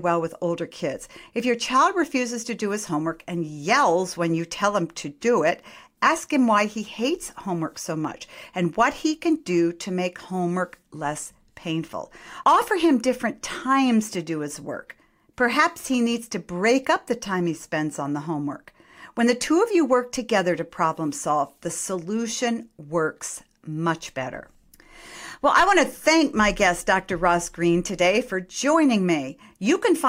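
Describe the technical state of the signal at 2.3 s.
At 2.3 s the speech signal is intact, with no dropout, distortion, clipping or other fault at that moment.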